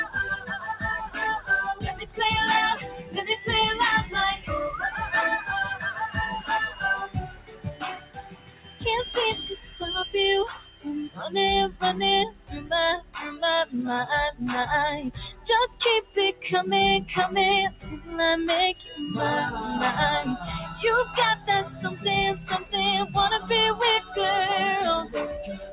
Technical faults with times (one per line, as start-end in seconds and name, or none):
0.00-25.73 noise suppressor applied to music or sounds
0.05-4.50 sound cut by the noise suppressor
5.75-13.15 sound cut by the noise suppressor
14.32-16.44 sound cut by the noise suppressor
17.70-18.99 sound cut by the noise suppressor
20.70-25.73 sound cut by the noise suppressor